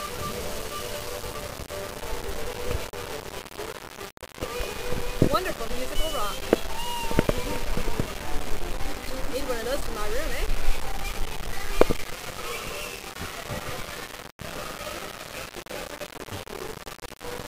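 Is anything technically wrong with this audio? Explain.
Yes. Throughout the clip there is low bit depth without dither. The grainy distortion that tracks the sound likely comes from rounding to about 6 bits with no dither. The error sits only around 10 dB below the signal. Quiet passages turn gritty or sputter into silence.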